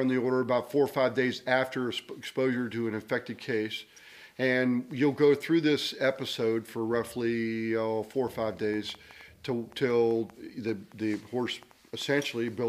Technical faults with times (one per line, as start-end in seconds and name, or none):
8.74-12.49 train of clicks